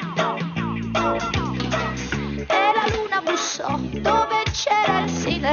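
Nothing in this one trips the ear, with no dropouts, glitches or other technical slips turning up anywhere along the way.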